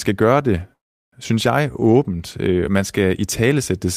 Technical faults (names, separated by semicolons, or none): call audio freeze